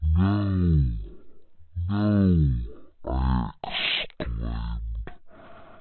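From start to finish the speech runs at about 0.36 times normal speed and sits roughly 17.6 semitones low, a classic wrong sample rate. Speed and pitch dropping together like that fits 44.1 kHz audio played back at 16 kHz, so everything sounds slow and sludgy.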